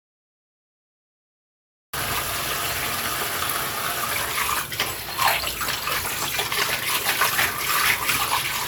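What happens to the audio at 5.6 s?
At 5.6 s the audio plays through intact, with no dropout, click, distortion or other fault at that point.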